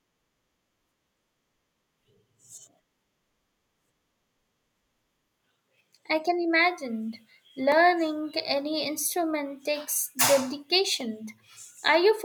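A speech recording with two tiny ticks, one at 7.72 s and another at 11.01 s. Each is a block of digital silence, about 1.3 ms and 0.7 ms long, too short to hear as a hole, so the hard cut to zero and back registers only as a click. The lengths fit 64- and 32-sample blocks left unfilled, pointing to the output buffer missing its deadline.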